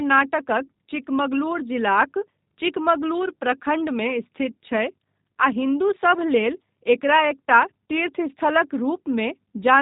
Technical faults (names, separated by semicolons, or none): G.729 codec